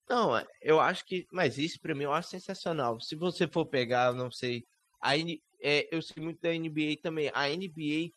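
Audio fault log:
throughout: overdone noise removal. The suppressor is cutting individual frequency bins hard wherever they come close to its noise estimate, and the softer parts of the speech fall under that threshold too. Between phrases the background drops to near silence scattered with twinkling specks. A spectrogram shows a near-black floor dotted with isolated bright musical-noise flecks, and speech harmonics look ragged and patchy rather than continuous.
0.45 s, 3.55–3.65 s, 6.16–6.26 s: lost packet rebuilt from error correction. Each time, the missing audio was replaced by the low-bitrate copy carried in the following packet, so nothing goes silent. The 20 ms spot at 0.45 s fits a single frame, and the two 60 ms stretches fit three consecutive frames. Those spans sound rougher and noisier. On a spectrogram they appear as brief smeared, grainier patches.
6.11–6.18 s: burst of packet loss. 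Here the receiver had nothing to play, so it extended the last sound for about 47 ms, turning it down as it went, and that concealment comes through as a held, fading buzz or hiss. When the stream picks up again, about 40 ms of the original is simply gone. On a waveform it looks like a decaying, overly regular stretch followed by a discontinuity. A spectrogram shows a frozen, repeated spectrum fading out before the error-corrected patch.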